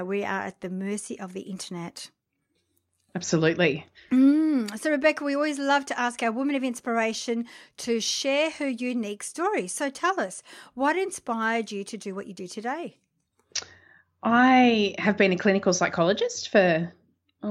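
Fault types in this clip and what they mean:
Nothing here to list: the speech comes through without any technical faults to point out.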